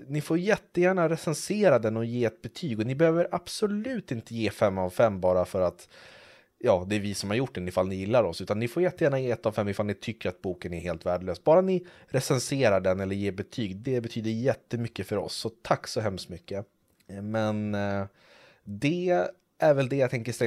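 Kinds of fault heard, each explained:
No faults turn up anywhere in this speech recording, so there's nothing to list here.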